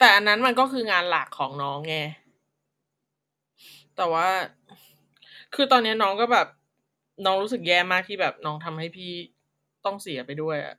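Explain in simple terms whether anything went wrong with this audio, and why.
Nothing went wrong; no faults can be heard anywhere.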